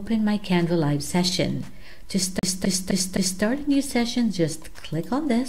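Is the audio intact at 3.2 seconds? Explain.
No. At 3.2 s the sound is caught in a fast, even stutter: the same 0.26 s fragment plays four times, with a brief mute at each jump, from 2.39 to 3.43 s. This is a CD stuck on one turn, where a scratch throws the laser back a track on every rotation.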